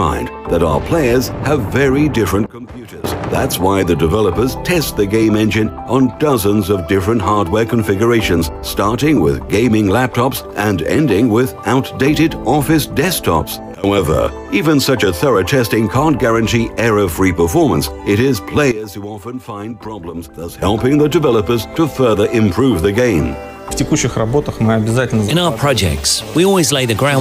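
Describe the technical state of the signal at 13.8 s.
A sudden gain jump from 13.75 to 13.84 s, likely a gain setting applied between two samples with no ramp. The level falls by about 18 dB at once, the sound and its background noise dropping together for those 90 ms.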